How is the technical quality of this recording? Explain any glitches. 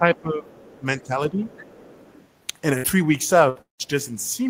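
The recording has audible faults: the speech dips in level early on, a faint second voice comes through, and the later part has short gaps and one longer break.

Speech suppressed in double talk at 0.00–0.57 s, 0.79–0.86 s, 1.03–1.12 s and 1.29–1.46 s: the echo canceller was likely unable to tell this talker from loudspeaker echo while both sides spoke, so it turned everything down. The speech drops by about 10 dB, and by about 5 dB in the last instance.

Other side's voice leaking through at 0.56–0.80 s, 1.01–1.06 s and 1.40–2.27 s: sound from the far end, played on the talker's loudspeaker, probably got past the echo canceller into the microphone. It sits about 30 dB below the speech as a faint background voice, longest in the final stretch.

Burst of packet loss at 2.77–2.86 s and 3.49–3.58 s: about 60 ms of audio is missing each time. The receiver stretched the last sound over the gap as a fading buzz or hiss, then resumed further on with that part lost.

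Long network dropout at 3.61–3.82 s: audio stopped arriving for about 180 ms, likely a network interruption. The concealment continues the preceding sound and fades it, leaving about 130 ms of silence before the speech returns with the gap's content gone.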